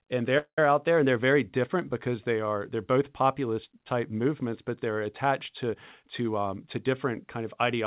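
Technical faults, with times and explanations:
0.38–0.59 s, call audio freeze: the sound stalls for about 195 ms. The last bit of audio carries on as a buzzy tail that fades, with about 90 ms of near-silence at the end, and then the audio picks up exactly where it left off. Nothing is lost. The freeze just inserts a gap, and the delay grows by that same 195 ms. The likely cause is late packets draining the jitter buffer, which forces the receiver to fill in until they arrive.
5.71–7.74 s, jitter buffer speed-up: the speech runs at about 109% speed while the pitch stays put, so the ending sounds a bit rushed. The buffer was holding more audio than it wanted. The receiver worked the delay back down by snipping out many tiny pitch-period-sized chunks in a row, removing about a fifth of a second in total. Like the rest of the clip, this part has the narrowband call sound, with nothing above 4 kHz, which fits G.711.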